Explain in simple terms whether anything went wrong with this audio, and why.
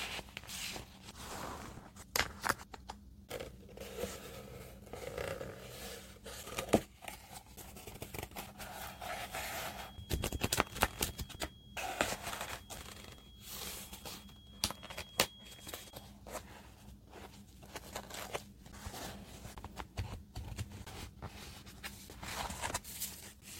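From 8.6 to 16.2 s a thin, steady whistle near 3.3 kHz sits faintly behind the sound: a feedback whistle. Sound from a loudspeaker was likely leaking back into the microphone. Unlike full howling feedback, it never builds into a howl; it just swells and fades slowly.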